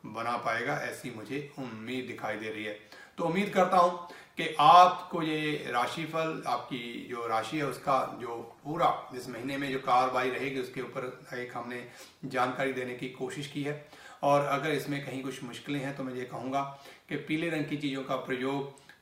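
A call bitrate drop runs from 7.68 to 12.25 s. The sound turns coarse and watery, with the top end dulled, as if the encoder fell from about 96 kbps to near 19 kbps. It stays at its roughest for about 2.2 s before recovering.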